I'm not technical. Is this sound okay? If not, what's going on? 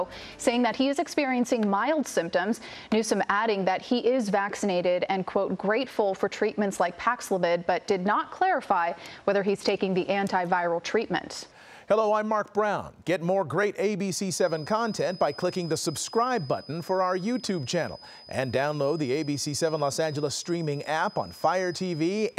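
No. From about 14.26 s until the end, a thin, steady high whistle at about 5 kHz sits faintly behind the sound, swelling and fading slowly in loudness. This is a feedback whistle, likely caused by a loudspeaker's output reaching the microphone and looping back, held just short of running away. Unlike a feedback howl, it never swells into a loud screech, and unlike mains hum it is a thin high note rather than a low drone.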